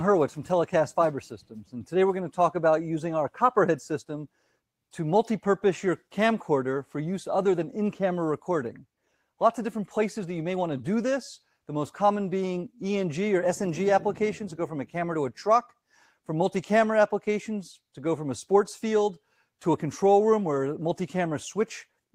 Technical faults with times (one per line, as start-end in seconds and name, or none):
1.42-1.73 sound cut by the noise suppressor